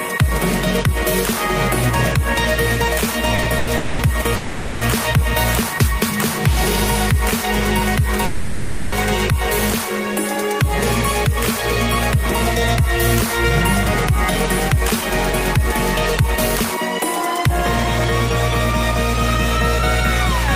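Short stalls from a late packet occur at 3.35–3.40 s, 3.42–3.46 s and 3.58–3.69 s. Each time the jitter buffer emptied and the receiver held the last sound for 30, 20 and 90 ms, giving brief buzzy stretches with nothing lost.

Call audio freezes follow at 3.77–4.01 s, 4.35–4.83 s and 8.25–8.94 s, filled for 220, 460 and 670 ms. The sound hangs as a fading buzz without dropping to silence, then resumes where it stopped, likely because packets were held up in transit.

A jitter buffer speed-up runs from 13.85 to 17.50 s. The receiver trimmed repeated pitch-period slices, about 150 ms in total, to shed the extra delay, so the audio plays about 3% fast at unchanged pitch.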